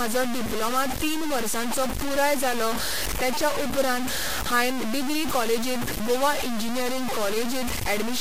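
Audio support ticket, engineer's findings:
Grainy distortion on the speech throughout, nearly as loud as the speech itself. Likely low bit depth without dither, which fits 3-bit truncation, with the error following the signal.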